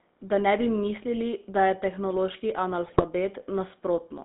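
A short speech clip that's gone through the GSM full-rate codec from start to finish, and you can hear it plainly. The band is squeezed to roughly 200 Hz up to 3.7 kHz, so there's no air or sibilance on top. The voice has that buzzy, gravelly grain you get when the codec rebuilds speech from a vocal-tract filter driven by a sparse, regularly spaced pulse train, which fits the old 13 kbps full-rate coder. Then from 2.86 to 3.03 s there's a burst of GSM bit errors. For about a sixth of a second the sound breaks into squawky, gargling garbage with sudden level jumps. That's what happens when corrupted filter, pitch and gain parameters reach the decoder and each damaged frame gets reconstructed with the wrong spectrum or loudness. It sounds like a run of frames hit on a weak link, with an error rate somewhere in the low single-digit percent.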